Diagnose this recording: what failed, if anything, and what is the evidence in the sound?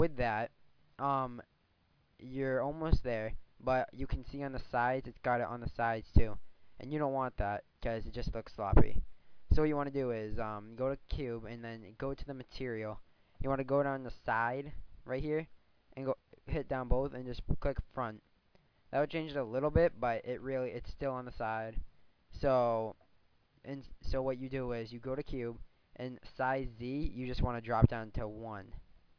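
Nothing stood out on listening that would point to a failure at any stage of the chain.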